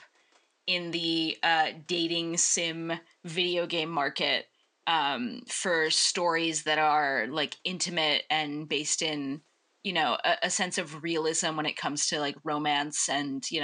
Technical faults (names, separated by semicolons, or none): none